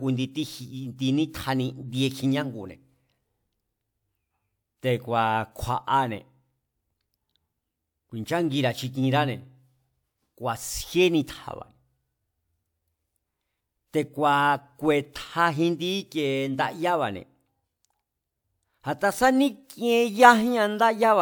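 No technical faults can be heard anywhere in this speech recording. Nothing in it stands out as a problem to describe.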